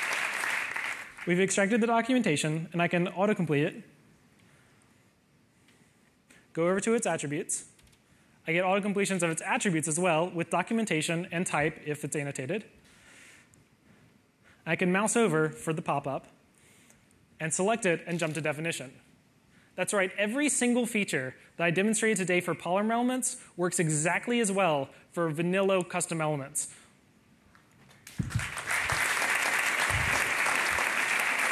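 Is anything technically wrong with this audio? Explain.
Yes. At 29.44 s there is a CD skip: a knock or disc flaw threw the laser onto another turn of the spiral. Playback mutes for a few milliseconds with a tick, then resumes elsewhere. Unlike a plain dropout, the sound doesn't continue where it stopped.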